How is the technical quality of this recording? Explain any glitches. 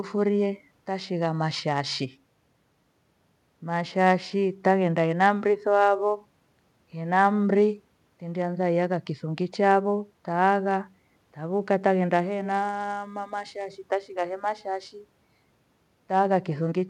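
The technical quality of this recording is good, and there are no glitches to explain.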